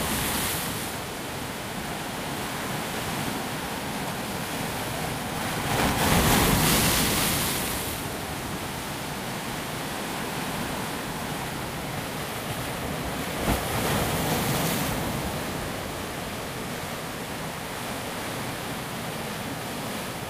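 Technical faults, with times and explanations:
5.37 to 7.77 s, buffer tearing. A rattling buzz at 200 Hz rides on the sound. The writer and reader of the ring buffer have slipped and cross every period, so a small slice of each buffer repeats audio about 20 ms old. The hard joins repeat at a rate that fits 5 ms buffers.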